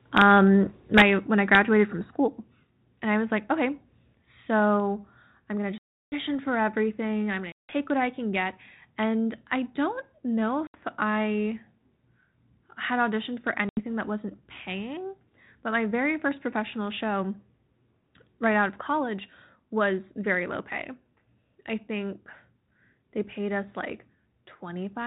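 At 0.97 to 1.02 s, just before "when I", a microphone overload cuts the tops off a loud peak. It goes about 6 dB over the limit, and roughly a tenth of the samples are flattened. The result is a harsh, crackling edge. Input volume set too high is the likely cause. At 1.02 s the microphone volume steps down by about 5 dB in one jump. Speech and background drop together.

A second, milder overload follows at 1.54 to 1.59 s, right after "when I". It is about 2 dB over, with only a few percent of samples clipped. It sounds like a brief gritty edge on the peak. At 2.04 s the level steps down again, by about 4 dB. Both drops follow a distorted peak. They sound like call software pulling the input level back.

Packet loss on an ADPCM call follows at 5.78 s, 7.52 s, 10.67 s and 13.69 s. The gaps last 340, 170, 70 and 80 ms. The last one falls between "had auditioned for" and "that wasn't paying but". 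Each gap is a hard-edged silence. After it, the decoder's predictor and step size no longer match the sender's. Speech returns slightly distorted, then settles within tens of milliseconds. The telephone band stops at 4 kHz, with light coding damage, which fits 32 kbit/s G.726.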